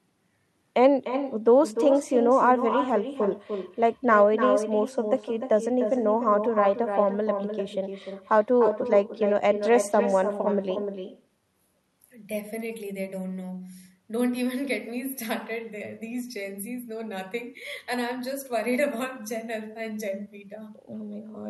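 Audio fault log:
Throughout: echo with no canceller. Every phrase of the speech is trailed by a thinner copy roughly a third of a second later, only about 8 dB down. The far end's loudspeaker is feeding its microphone, and nothing strips that leak out before it comes back.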